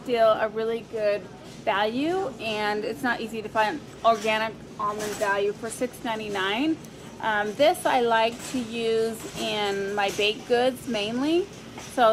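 Nothing in the audio stood out as a technical problem on listening.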